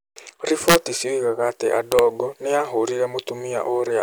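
Integer overflow strikes at 0.68–0.76 s, just before "cioigaga atĩ", and again at 1.92–1.99 s, right after "cioigaga atĩ". Peaks pushed about 2 dB and about 1 dB past full scale wrap to the opposite sign instead of limiting, producing violent cracks far harsher than clipping.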